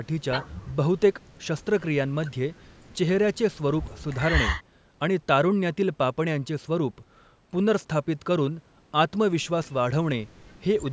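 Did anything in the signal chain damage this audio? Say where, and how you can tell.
No, nothing in the signal chain damaged this speech.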